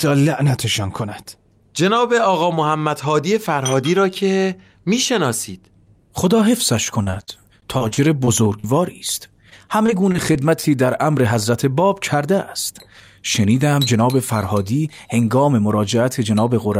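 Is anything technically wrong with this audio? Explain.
Yes. Repeated packet loss (robotic sound) occurs twice, from 7.03 to 8.66 s and from 9.50 to 10.71 s. Packets kept arriving late or not at all, and each hole was covered by extending the last fragment. The speech turns choppy, with short pieces missing, the longest gap about 43 ms.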